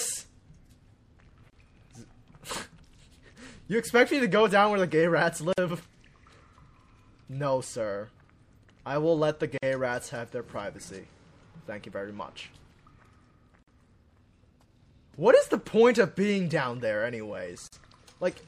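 Throughout the audio there is plainly audible watery, swirly smearing with metallic chirps on bright sounds and blurred attacks, likely from MP3 compression at a low bitrate around 64 kbps; unlike broadband noise reduction, the artefacts flicker frame to frame rather than pumping with level. Brief silences at encoded-piece joins fall every 4.0 s at 1.5, 5.53, 9.58, 13.63 and 17.68 s, the first about 29 ms and the rest about 49 ms. Unlike a packet dropout, nothing is skipped: the sound resumes exactly where it stopped, because each separately encoded piece kept its encoder start delay and padded last frame.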